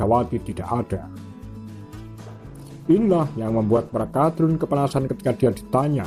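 From 2.16 s to the end there's a call bitrate drop: the sound turns rough and muffled, like the encoder falling from about 96 to 14 kbps, bottoming out for 1.8 s.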